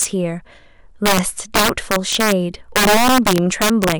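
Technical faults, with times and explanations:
Throughout, integer overflow: the speech is driven about 8 dB past full scale, and instead of being limited, the loudest few percent of samples wrap around to the opposite sign. Each peak jumps across the whole range, giving harsh, violent cracks far sharper than clipping.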